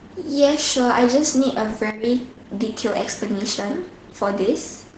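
Opus voice compression runs throughout: with nothing above 9.9 kHz, the speech is muffled, hoarse and faintly robotic, which fits SILK coding at around 12 kbps rather than simple low-pass filtering. From 1.90 to 2.04 s, a sudden gain jump cuts the level by about 9 dB from one sample to the next, with the noise floor dropping along with the speech. Unlike compressor pumping or a fade, there is no ramp, likely from a gain change applied without smoothing.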